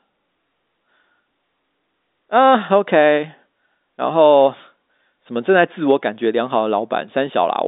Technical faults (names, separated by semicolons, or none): none